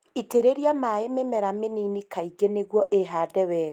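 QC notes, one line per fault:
0.37–0.41 s, short concealed packet loss: about 20 ms of speech arrived too late for the decoder, so the receiver stretched the preceding sound across the hole and crossfaded back into real audio. It is heard as a brief smear or wobble, not a clean dropout.
2.83–2.91 s, burst of packet loss: a run of roughly 60 ms of speech was lost in transit. The receiver extended the last sound while fading it down, then resumed further along, so this stretch comes out as a short held buzz or fading hiss with audio skipped.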